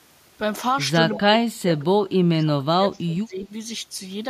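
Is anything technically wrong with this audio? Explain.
Yes, there are two problems.

From 1.12 to 1.19 s and again from 3.39 to 3.46 s, there is an echo leak: a faint copy of the speech trailing 181 ms behind. It sits about 15 dB below the speech at first, then about 30 dB below. This is likely a loudspeaker echo that the far end's canceller missed.

From 1.19 to 3.5 s, the speech is suppressed in double talk. The speech keeps dipping and breaking up, sometimes by around 25 dB, for roughly two seconds in total. The likely cause is an echo canceller turning down the speech while both sides talk at once.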